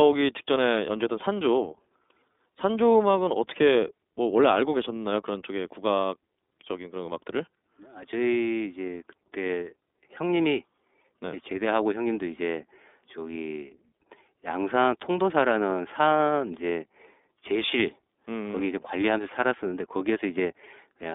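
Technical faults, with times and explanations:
Throughout, iLBC codec: the speech is confined to a narrowband line from 250 Hz to 3.6 kHz and carries plainly audible roughness and a synthetic edge. Each 30 ms frame's excitation is coded independently, which fits the 13.33 kbps mode.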